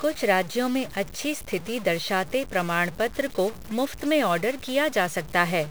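From start to finish the speech carries a harsh, buzzy edge, and the pauses never go quiet; they fill with a steady hiss of noise instead. That combination points to a stuck bit, likely from a faulty line or converter holding one data bit fixed. Roughly half the samples get knocked off by a step of about -35 dBFS, following the waveform's own shape, so the grit rides along with every syllable and flips with the sign of the low-level signal in the gaps.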